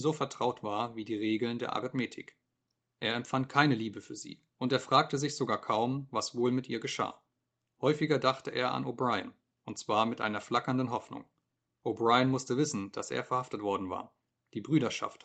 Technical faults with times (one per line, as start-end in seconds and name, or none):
none